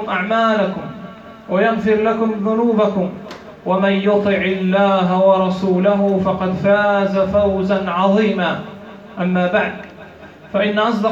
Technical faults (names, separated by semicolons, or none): none